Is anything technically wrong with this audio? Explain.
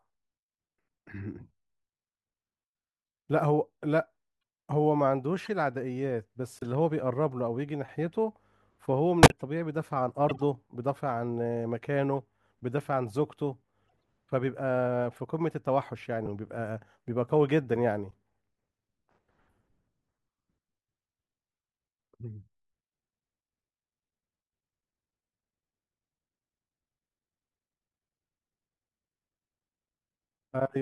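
Yes. The speech has seven bursts from corrupt frames being decoded, at 5.43–5.48, 6.57–6.63, 9.23–9.42, 10.29–10.42, 12.13–12.21, 13.85–14.01 and 16.23–16.27 s. Damaged bits in a few compressed frames were decoded anyway, so wrong gains and misread codes put energy at the wrong frequencies. Each burst sounds like a brief chirp, squeak, blip or burst of noise. The loudest, near 9.2 s, peaks around -10 dBFS, and the faintest, near 13.9 s, is about -60 dBFS. On a spectrogram each one is a short block of misplaced energy with hard edges at frame boundaries. On the waveform it is a jagged spike that does not follow the speech envelope.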